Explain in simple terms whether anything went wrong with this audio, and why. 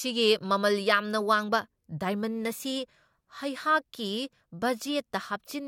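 Listening to this speech recording, nothing stood out as having gone wrong at any point.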